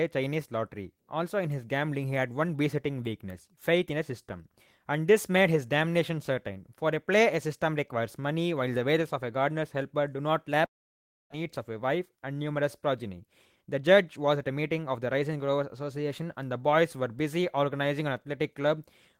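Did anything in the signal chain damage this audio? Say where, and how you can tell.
Yes. A long network dropout runs from 10.65 to 11.34 s: the sound stops, a brief fading continuation gives way to silence, and speech resumes with about 400 ms never played. This is likely a stall in packet delivery shifting playout delay by around 300 ms.

A jitter buffer speed-up follows from 13.13 to 15.36 s. The speech plays at about 111% speed with unchanged pitch and sounds hurried, as the receiver trims pitch-period slices, roughly 300 ms in total, to drain a jitter buffer holding more audio than it aims for.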